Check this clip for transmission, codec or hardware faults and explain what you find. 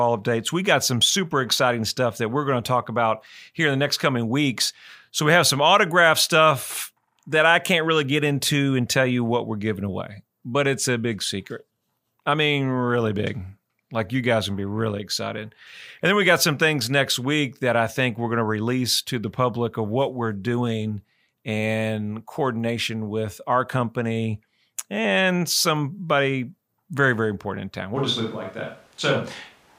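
One fault turns up, near the end. At 27.97 s, right after "very important in town", the sound switches to a distant microphone and stays that way to the end. The change is abrupt. The speech turns roomy and hollow, with less bass. Loudness stays about the same. Room noise rises to roughly 30 dB below the speech. The likely cause is that the close microphone's signal dropped out, leaving a mic set further back.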